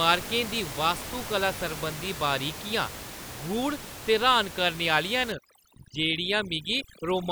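From 5.32 s to 7.31 s, overdone noise removal clamps down on individual frequency bands it mistakes for noise. The room noise, about 12 dB below the speech earlier, drops and breaks up into twinkling specks. A low-pass filter would dull the top evenly, but here the loss flickers band by band.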